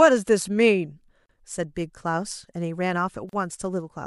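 At 1.26 to 1.29 s and again at 3.29 to 3.33 s, the speech drops into silence for about 36 ms and 38 ms, then resumes where it stopped. These are gaps at joins of encoded pieces, repeating every 2.0 s, where each encoder's leading delay and final-frame padding were never trimmed.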